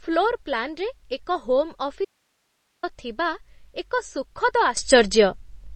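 Throughout the speech there are watery, swirling artefacts and softened consonant onsets, with nothing above about 8.3 kHz, which points to MP3 compression, likely at a low bitrate around 32 kbps. A spectrogram shows a flat ceiling at 8.3 kHz and patchy, flickering energy below it.

From 2.05 to 2.83 s, just after "ଏକ ହୋମ୍", the speech cuts out abruptly for 783 ms, leaving only hiss some 50 dB down, until it resumes at "ଥିବା ଏକ". This is an audio dropout to a faint residue, likely a signal loss while the downstream path stayed live. The waveform collapses to a thin noise band, and the spectrogram shows a blank, evenly grey block with sharp vertical edges.

At 4.77 s a sudden gain jump raises speech and background noise together by about 12 dB, holding to the end. The cause is likely a gain change applied without a ramp. The waveform envelope steps up in a single sample, and the spectrogram brightens abruptly across all frequencies at once.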